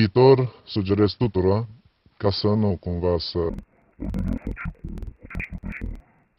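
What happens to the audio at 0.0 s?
Nothing goes wrong at 0.0 s; the audio is intact at that moment.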